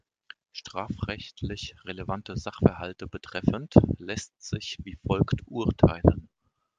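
Nothing goes wrong anywhere in this bit of speech, so there's no fault to point to at any moment.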